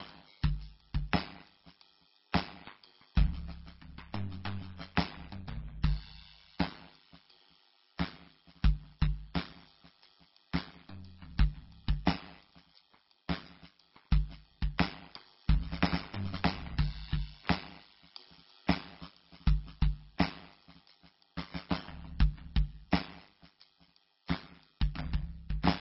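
The whole piece of music sounds watery and smeared, likely from heavy MP3 compression at a very low bitrate, something around 17 kbps. An overlap-add ripple also runs right through it. The frames were rejoined with a mismatched overlap, so the level dips by about 60 dB roughly a hundred times a second, giving a harsh, buzzy tremolo.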